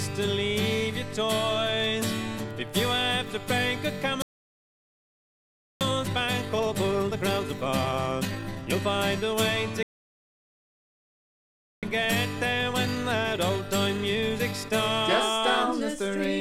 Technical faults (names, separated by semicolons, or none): playback stall; time-compressed catch-up